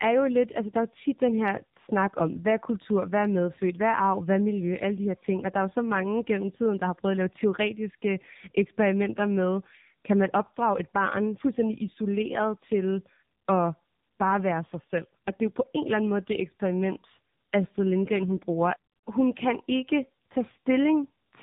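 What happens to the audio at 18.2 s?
At 18.2 s the speech carries tandem speech coding, present throughout the clip. The signal passed through two speech codecs in a row, with the sound pointing to AMR-NB at both ends and a G.711 link between them. Each coder re-encoded the previous one's flawed output, so the errors stack. Nothing sounds above 3.7 kHz. The speech comes across muffled and rough, with a watery warble on it.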